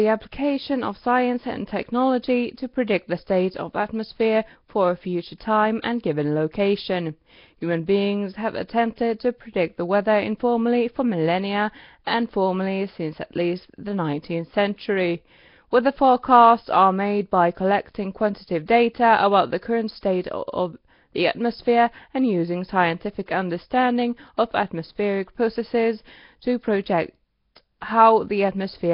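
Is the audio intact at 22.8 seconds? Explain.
No. At 22.8 seconds the speech carries Nellymoser compression, present throughout the clip, likely from the old Flash microphone codec. Heavy low-bitrate block coding starves weak bands and fills them with noise, leaving a rough, hissy, underwater smear with nothing above about 5.3 kHz.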